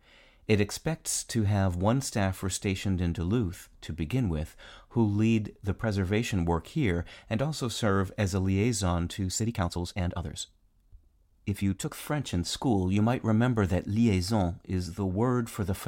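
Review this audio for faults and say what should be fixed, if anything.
A time-stretched section runs from 9.27 s to 11.93 s, right after "as a liaison to". The pace jumps abruptly to about 1.52 times normal speed and sounds rushed, while the pitch stays where it was. That pairing likely comes from software squeezing the passage to fit a set length, holding pitch steady by dropping short slices of the waveform rather than simply playing faster. The section should be restored from an unstretched source. To prevent it, fit the audio to length by trimming or re-editing instead of compressing time.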